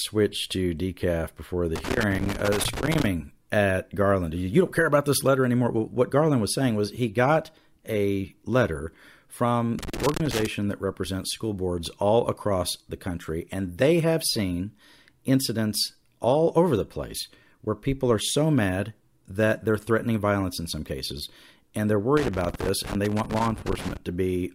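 A worn or dirty contact somewhere in the signal path is making and breaking as it shifts, so the speech is repeatedly chopped. The result is loose connector crackle, heard as irregular bursts of scratching: from 1.76 to 3.06 s, right after "to decaf before the"; from 9.79 to 10.46 s, between "got a letter from" and "that represents school boards"; and from 22.17 to 23.97 s.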